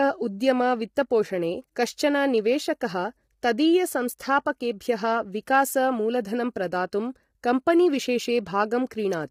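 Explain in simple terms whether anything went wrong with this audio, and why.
The speech sounds rough and grainy from start to finish, with a hiss sitting between the tones of the voice and a thin, artificial-sounding top end. That points to heavy low-delay AAC compression, likely the kind used for video calls.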